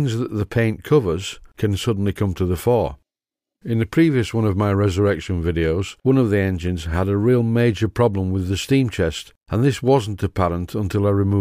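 No technical faults can be heard anywhere in the audio, and the signal holds steady in level and continuity throughout.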